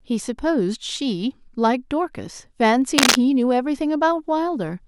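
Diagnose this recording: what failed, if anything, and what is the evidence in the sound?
The fault sits in the analogue wiring. From 2.96 to 3.16 s, a dense, ragged burst of scratching rides over the speech, a few dB louder than the voice. This is cable scratch noise, likely from a worn connector whose contact resistance flickered as it moved.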